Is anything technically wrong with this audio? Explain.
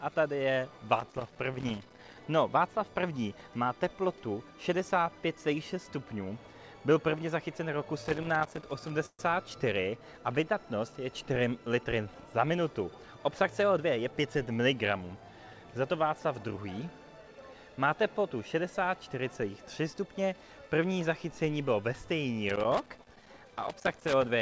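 Yes. Irregular bursts of crackle and scratching run from 1.00 to 2.17 s, 8.04 to 8.90 s and 22.49 to 24.29 s. This is loose connector crackle: a worn or dirty contact makes and breaks as it shifts, chopping the signal, with pops where DC on the line jumps.

From 9.06 to 9.21 s the sound hangs as a fading buzz, with about 40 ms of near-silence, then carries on with nothing lost. This call audio freeze most likely comes from delayed packets emptying the jitter buffer, leaving a 130 ms gap while the receiver stretched the last sound.

Between 13.08 and 14.34 s the audio runs about 9% fast at unchanged pitch and sounds hurried. This is a jitter buffer speed-up: with too much audio queued, the receiver trimmed short pitch-period pieces, roughly 150 ms in total, to pull the delay back down.

The audio also stops at 8 kHz, which fits the G.722 call codec it passed through.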